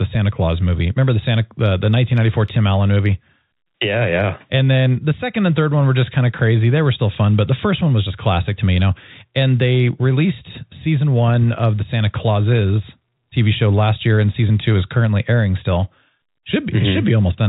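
Nothing stood out on listening to this speech, which carries the narrow, telephone-band character of ordinary G.711 telephone coding.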